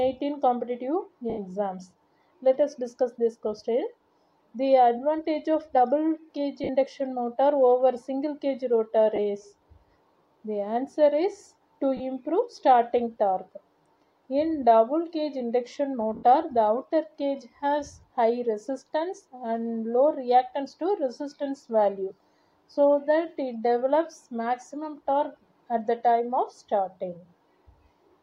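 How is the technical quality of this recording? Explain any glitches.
The recording is marred by five brief dropouts, each a case of lost LE Audio frames, with light lossy compression. Lost LE Audio frames at 1.30–1.38 s (80 ms), 6.64–6.69 s (50 ms), 9.16–9.19 s (20 ms), 11.97–12.00 s (30 ms) and 16.15–16.23 s (80 ms): when Bluetooth frames fail to arrive, the LC3 decoder fills each gap by repeating the last spectrum with scrambled phase, fading it as the gap lengthens. The result is a short noisy smear in place of clear tone.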